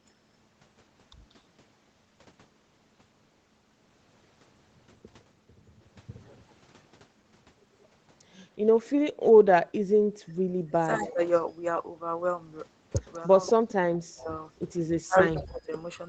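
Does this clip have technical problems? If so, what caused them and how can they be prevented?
Yes. The speech dips, thins or drops out in pieces at 9.13–9.45 s, 10.12–11.2 s, 13.54–14.3 s and 15.05–15.72 s, sinking by about 15 to 35 dB. This is likely speech suppressed in double talk: the echo canceller mistook overlapping talk for echo and attenuated it. Better double-talk detection, or headsets, prevents this.

A faint repeat of the speech, about 15 dB down and trailing by 188 ms, appears at 10.93–11.13 s, 13.15–13.72 s and 15.34–15.4 s. This is likely an echo leak: the far end's loudspeaker sound reached its microphone and escaped cancellation. Headphones, or a better-tuned echo canceller, prevent it.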